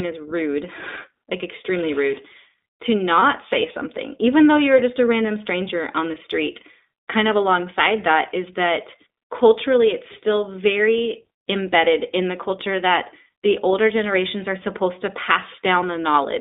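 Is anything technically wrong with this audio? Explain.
Yes. Throughout the clip the speech sounds thin, slightly rough and synthetic, with nothing above about 3.7 kHz or below 300 Hz. This is the iLBC codec, which codes each 20 ms frame independently. The plainly audible damage fits its 15.2 kbps mode.

From 3.20 to 3.23 s the speech briefly turns into a held, faintly buzzy vowel before snapping back. These are lost iLBC frames, most likely a single 20 ms frame. The decoder filled the gap by repeating the last pitch cycle mixed with noise, and because frames stand alone, the speech recovers almost at once.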